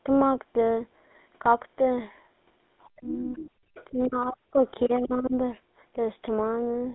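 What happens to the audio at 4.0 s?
Speech suppressed in double talk runs from 3.91 to 4.64 s. The talker's level plunges very deeply, likely because an echo canceller ducked both sides while they overlapped.

The other side's voice leaking through is heard at 4.0–4.08 s as a very faint, brief second voice. It is likely loudspeaker echo the canceller missed, and unlike crosstalk it comes from the far end of the call.

The GSM full-rate codec, present throughout, adds a buzzy, gravelly roughness and cuts everything above 3.8 kHz. That is a steady band limit, not a momentary loss.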